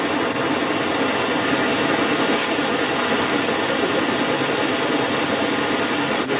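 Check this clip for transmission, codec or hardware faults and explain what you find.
One fault runs through the whole clip: the other side's voice leaking through. It is heard from 0.0 to 6.4 s. A second voice comes through alongside the speech, roughly 10 dB louder than it. The likely cause is the talker's loudspeaker feeding the microphone, with the echo canceller leaving much of that far-end voice in place. The audio stops near 4 kHz, as G.711 mu-law on the call path would give.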